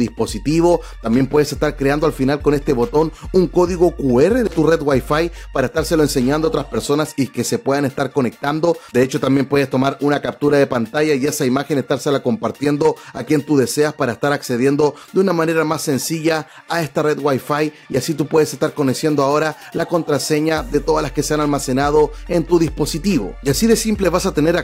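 No technical faults can be heard anywhere in the clip, so there is nothing to place in time order.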